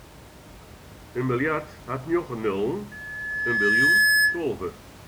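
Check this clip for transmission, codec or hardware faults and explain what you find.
There's one real fault here, a loudspeaker feedback squeal. From 2.91 to 4.43 s, the mic picks up its own speaker and the loop runs away at 1.7 kHz, swelling over about a second into a piercing tone roughly 10 dB above the speech. The faint room noise, about 22 dB down, is just the room itself.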